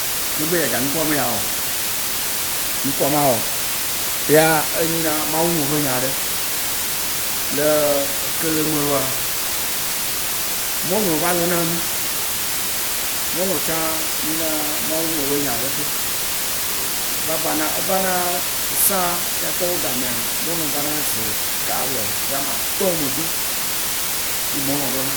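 From the first moment to the end, the speech sits in a thick, steady hiss: classic low bit depth with dither. The audio has been squeezed down to just 4 bits, and dither was added before rounding, so instead of gritty distortion the rounding error spreads out as even white noise. At this depth that hiss comes up roughly level with the speech itself, so the voice sounds buried in a constant, unchanging wash.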